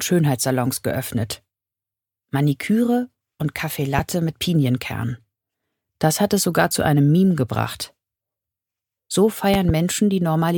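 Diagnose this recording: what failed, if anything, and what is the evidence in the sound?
A loud pop appears at 3.99 to 4.01 s, roughly 10 dB above the signal, and a double pop follows at 9.54 to 9.72 s, roughly 15 dB up. The cause is likely an analogue-side voltage step from a plug, switch or static discharge.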